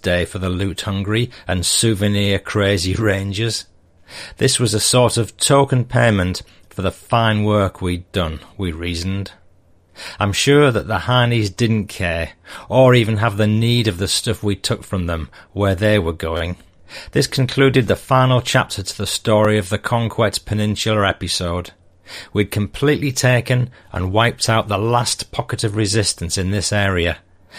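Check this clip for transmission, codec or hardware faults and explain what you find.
There are two repeated-buffer glitches in the speech, both short. At 16.37 s a tiny slice of audio, about 11.6 ms long, plays three extra times in a row, making a quick stutter until about 16.41 s. At 19.45 s the same thing happens once. New audio didn't arrive in time, so the device replayed its last buffer, which fits a 512-sample buffer. Each repeat joins hard, so it comes across as a brief buzz or click rather than an obvious echo, and nothing seems to go missing.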